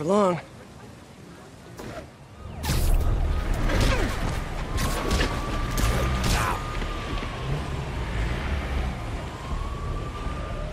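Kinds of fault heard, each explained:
Kinds of fault heard: none in this clip.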